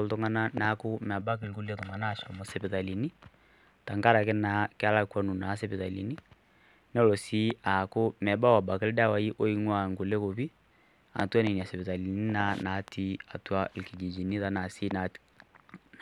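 From 1.21 to 2.45 s, one channel arrives roughly a millisecond and a half behind the other, and summing them to mono produces channel delay (comb filtering): notches from around 300 Hz upward hollow the speech into a phasey, thin tone.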